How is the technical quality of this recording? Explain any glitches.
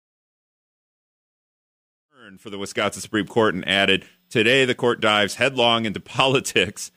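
No glitches can be heard anywhere in the speech. The level rises in a smooth, editor-style fade from around 2 s until 3.31 s, with no click or hard edge.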